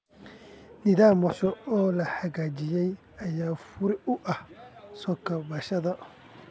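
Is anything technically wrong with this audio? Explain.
Yes, two faults. Skip ahead at 1.30 to 1.32 s: about 400 ms of speech was dropped, so playback jumps forward with no gap and the two sides are joined almost directly. Jitter buffer speed-up from 1.44 to 4.11 s, ending just before "u ah": having built up too much audio, the buffer repeatedly trimmed short pitch-period pieces, roughly 200 ms in all. The speech runs at 108% speed with unchanged pitch and sounds hurried. Through all of this, the call codec path leaves nothing above 8 kHz, consistent with G.722.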